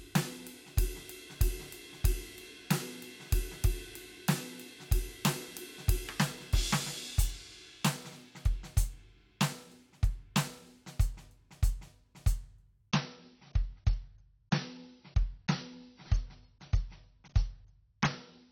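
A music clip in which an adaptive stream drops to a lower bitrate from 12.91 s to the end at 18.52 s. The quality changes abruptly, with no gap: nothing remains above about 6.6 kHz, and smeared, swirly codec artefacts appear, which fits a switch from roughly 96 kbit/s AAC down to about 24 kbit/s. A plain low-pass filter would dull the top end cleanly. Here, the added artefacts and the seamless switch mark a bitrate change rather than a rebuffer.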